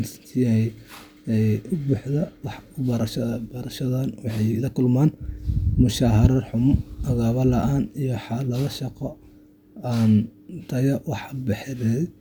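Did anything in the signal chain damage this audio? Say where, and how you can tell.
No, nothing in the signal chain damaged this speech.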